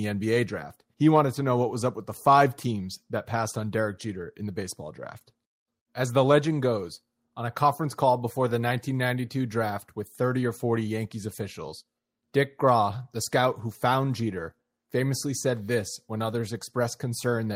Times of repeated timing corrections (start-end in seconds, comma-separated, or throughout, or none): none